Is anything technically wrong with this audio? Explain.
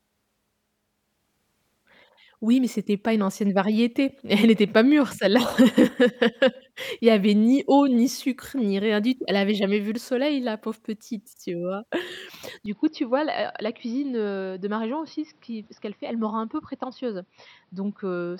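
Yes. At 12.66 s the input was likely switched to a poorer device, which lasts to the end. Its narrower band leaves nothing above 5.8 kHz, so the speech turns dull, drops about 5 dB with no gap, and picks up new background noise about 40 dB below it.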